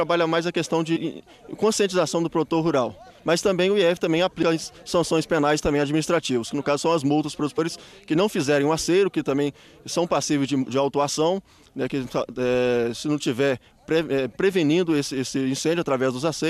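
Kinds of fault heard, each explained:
Compressed frames skipped: whole 23.2 ms frames went missing or were rejected in decoding, so the audio leaps ahead three times.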